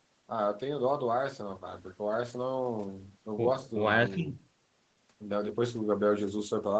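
There are no technical faults to describe in time order in this speech clip.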